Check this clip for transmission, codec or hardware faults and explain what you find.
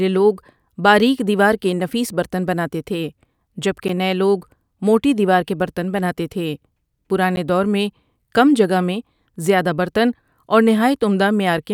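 Two brief dropouts are present, both of the same kind. A block of digital silence occurs at 3.88 s and again at 7.36 s, each about 10.7 ms long. The speech cuts abruptly to silence and back, so each gap is heard as a sharp tick. The matching length fits a 512-sample output buffer that was not filled in time.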